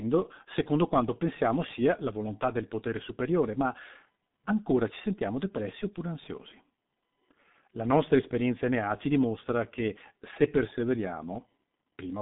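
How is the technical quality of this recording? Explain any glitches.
The speech is muffled and hoarse, with smeared consonants, from start to finish. This is G.723.1 codec damage: long 30 ms frames at a bitrate fitting about 6 kbit/s update the voice model slowly, and nothing above 3.8 kHz survives.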